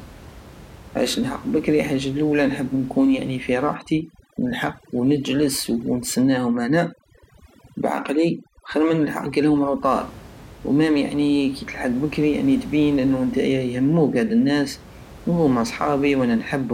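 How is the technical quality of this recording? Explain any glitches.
The recording has one clear fault, overdone noise removal, from 3.74 s to 9.90 s. It begins just after "اللولى نحب نكون في". Through that stretch, a noise reduction stage is working far too hard. It pushes individual frequency bands down to almost nothing whenever they sit close to its picture of the noise. Softer parts of the speech get caught too. The background drops and breaks up into twinkling specks. The room noise, about 21 dB below the speech, is part of the recording itself.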